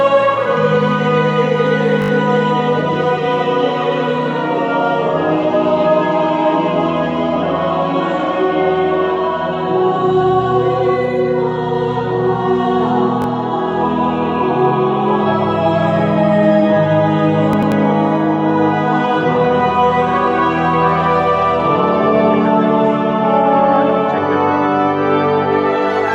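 The audio stutters three times from a repeated buffer: 2.02 to 2.1 s, 13.22 to 13.26 s, and 23.76 to 23.78 s. Each time, one 20 ms chunk replays with hard joins, because new data arrived late. No audio is lost. From 17.53 to 17.72 s, frames out of order make a garbled flutter. Two neighbouring blocks of about 93 ms play swapped, which fits single frames decoded in the wrong order.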